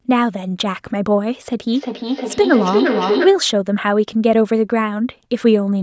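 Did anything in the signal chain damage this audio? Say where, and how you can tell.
Yes, at the call stage: a feedback echo between two devices in the same room from 1.73 to 3.55 s. One device plays the other's microphone signal, that microphone picks it up again, and neither device's echo canceller removes sound it did not play itself. You hear the speech come round again at a regular spacing of roughly 400 ms, with the repeats reaching about 2 dB below the direct speech. The call's own microphone processing, which limits the audio to 8 kHz, is not at fault.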